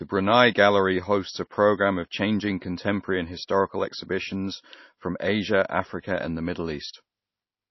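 Heavy MP3 compression is the likely cause of the damage heard across the whole speech clip, with a hard treble cut-off near 5.8 kHz consistent with a starved bitrate around 24 kbps. Sibilants sound dull and chirpy, with a watery, swirling texture and smeared attacks.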